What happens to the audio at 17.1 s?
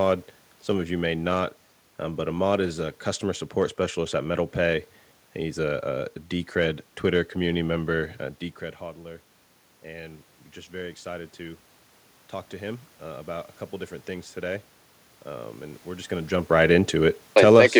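At 17.1 s the level is in the middle of an automatic gain falling, from 16.52 to 17.62 s: the gain control judged the input too loud or its background noise too strong and eased it down by about 3 dB. Unlike a talker moving away, the room noise drops along with the speech.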